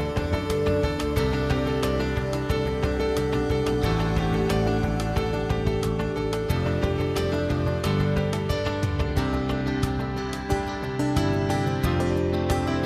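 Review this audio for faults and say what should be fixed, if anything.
Nothing stood out on listening, so there is nothing here that needs fixing.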